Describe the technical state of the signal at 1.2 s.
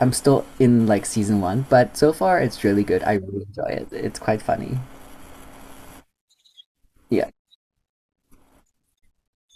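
At 1.2 s the speech signal is intact, with no dropout, click, distortion or other technical fault to be heard.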